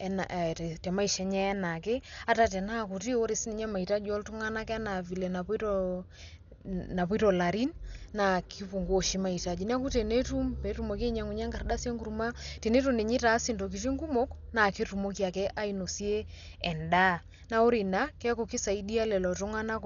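Speech throughout sounds dull and rough, with a fluttering grainy noise clinging to voiced tones, heavy damage that points to Dolby Digital compression, likely at a low bitrate around 48 kbps. A spectrogram shows nothing above 7 kHz and speckled, patchy energy where missing detail is noise-filled.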